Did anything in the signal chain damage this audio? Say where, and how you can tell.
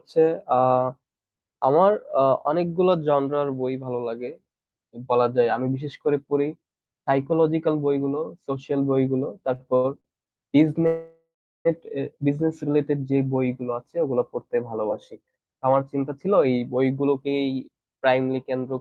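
Yes. Between 9.55 and 10.28 s the network path produces repeated stalls (stutter): five short gaps, the longest 79 ms, total 190 ms, about a quarter of that span. Late packets kept draining the jitter buffer, and the receiver stretched the last sound each time. Nothing is lost, but delivery drags.

From 10.86 to 11.67 s there is a call audio freeze: the last sound carries on, fades, and goes silent for about 390 ms before the audio resumes exactly where it stopped, 789 ms later. The likely cause is packets held up in the network, emptying the jitter buffer.

From 15.21 to 17.28 s a jitter buffer speed-up runs the audio at 110% speed with unchanged pitch, sounding hurried. With more audio buffered than its target, the receiver trimmed pitch-period-sized pieces repeatedly, around 200 ms in all, to bring buffered delay back to its target.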